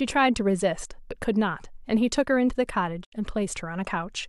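Speech with a digital broadcast dropout from 3.03 to 3.14 s: the receiver muted after a few corrupted frames, fading over 20 ms into 72 ms of silence. The waveform shows a flat gap and the spectrogram a blank vertical band.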